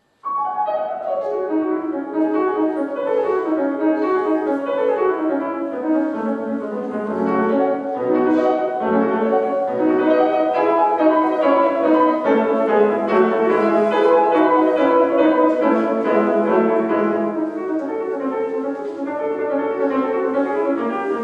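Nothing stood out as a technical fault on listening to this audio.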